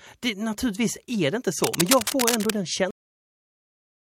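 A speech clip with two faults. From 1.64 to 2.50 s, cable scratch noise sits over the speech at roughly the same level as the voice. It is a dense, irregular scratching, likely from a worn cable or connector being moved, and shows as ragged broadband smears on a spectrogram. At 2.91 s a cut-off end stops the audio mid-sound, dropping abruptly to a flat digital-silence line on the waveform with no decay tail, because the final buffers never reached the output.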